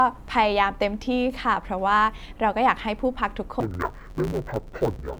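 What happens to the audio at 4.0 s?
At 4.0 s the sound is inside a stretch of interleaved audio read as planar, running from 3.60 s to the end at 5.19 s. Each 10 ms block of alternating left-right samples is split into halves and played as two channels, which dulls the speech into a robotic buzz at 100 Hz. A spectrogram shows evenly spaced 100 Hz striping, and the waveform breaks into 10 ms segments.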